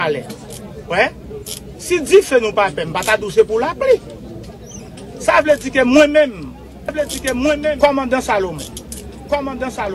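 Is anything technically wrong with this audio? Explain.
Yes. From 6.89 s to the end, the audio has a doubled audio track: a second full-band copy of the same sound runs about one and a half seconds behind the original, roughly 5 dB quieter. It carries no decay or room colour, so it reads as a flat repeat rather than an echo, and it cuts in abruptly. The likely cause is the signal being captured a second time through a slower path, or an edit leaving two copies out of step.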